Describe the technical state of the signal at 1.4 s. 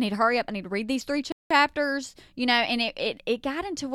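At 1.4 s you're right inside a playback stall: just after "to read these three" the speech drops to silence from 1.32 to 1.51 s, about 185 ms, then picks up again. Likely the player starved for data or its thread got blocked briefly.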